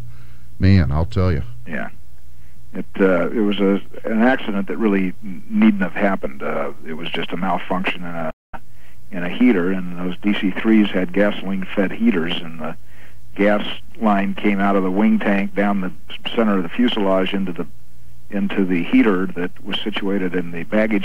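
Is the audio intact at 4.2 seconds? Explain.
Yes, at 4.2 seconds the audio plays through intact, with no dropout, click, distortion or other fault at that point.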